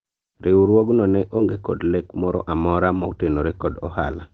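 At 1.37 to 1.39 s and again at 2.97 to 2.99 s, short concealed packet loss occurs: about 10 ms of the call audio arrived too late for the decoder each time. The receiver covered the gap by extending the preceding speech and then blending back into the real signal. Each one comes through as a tiny smear or wobble, on top of the call codec's coding noise and its high-frequency limit near 8 kHz.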